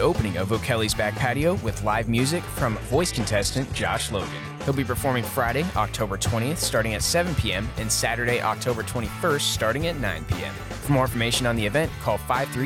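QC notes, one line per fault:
2.65–4.65 s, adaptive stream at a lower bitrate: treble above 12.3 kHz vanishes abruptly, without a gap. This fits a drop to low-bitrate HE-AAC.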